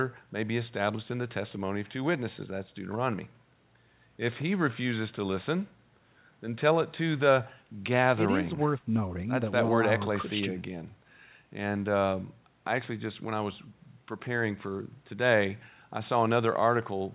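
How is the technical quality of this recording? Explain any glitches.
No glitches or faults audible.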